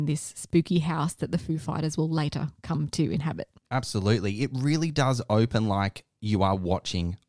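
No technical faults are audible in this speech.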